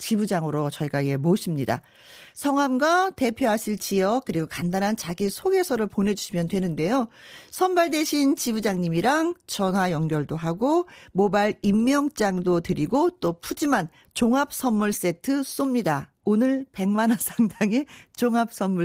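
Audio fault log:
The speech is carried by Opus voice compression at full audio bandwidth with only light coding wear, and no fault is present.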